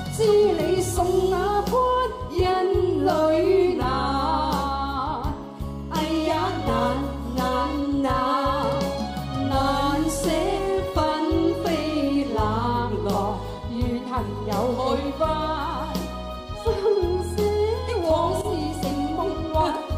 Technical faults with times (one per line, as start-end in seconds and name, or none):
none